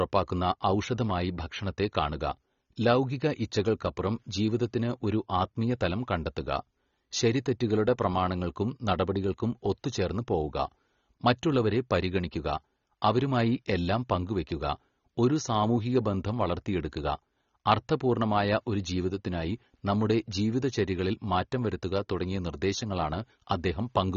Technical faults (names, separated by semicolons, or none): AAC compression